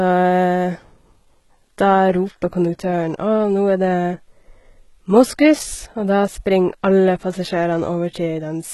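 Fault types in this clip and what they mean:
HE-AAC compression: likely HE-AAC coding at a rate that fits a 16 kbps stream, so only the low band is coded and the treble is rebuilt from copied lower bands. The speech is heavily damaged, with gritty, lispy s sounds and nothing above 11.8 kHz.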